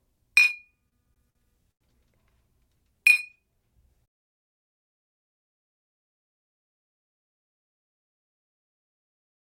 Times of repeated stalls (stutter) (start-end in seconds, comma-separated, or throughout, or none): 0.74-1.82